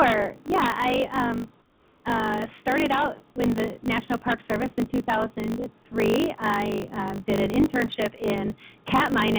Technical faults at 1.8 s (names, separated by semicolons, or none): block size mismatch (truncated); comfort noise in place of the background